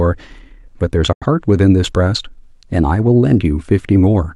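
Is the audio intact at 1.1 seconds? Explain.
Yes, but only just. At 1.13 s there's a digital broadcast dropout: the sound snaps to silence with a very quick fade, about 3 ms, and stays gone until about 1.26 s, when it picks up again mid-stream. That's the receiver muting after it stopped getting usable frames, either losing the signal or failing the checksum. The hole fits a couple of lost frames, and whatever speech fell in that gap is simply missing.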